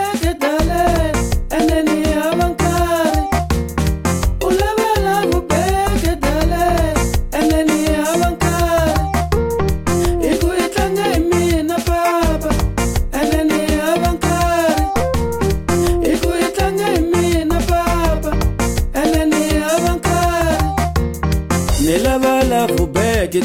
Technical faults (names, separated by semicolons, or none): none